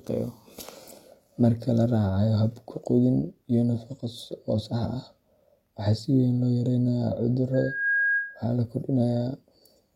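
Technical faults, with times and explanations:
7.54–8.45 s, loudspeaker feedback squeal: a single 1.6 kHz tone swells over roughly 0.4 s to about the level of the speech, as the microphone-to-loudspeaker loop gains more than it loses at that frequency. Unlike a steady interfering whistle, it builds by itself before stopping.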